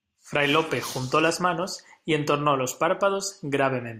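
No technical faults are audible.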